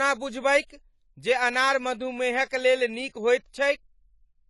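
From the start, the speech is band-limited, with nothing above about 11.4 kHz, and it has a dull, smeared quality with a fizzy edge on sibilants. This plainly audible damage is likely AAC compression, and it fits AAC-LC at around 32 kbps.

From 0.66 to 0.70 s, just before "जे अनार", a short hiss spreads about 36 ms ahead of the onset. This is pre-echo: quantisation noise sized for the louder attack fills the quiet start of the same block and softens the onset.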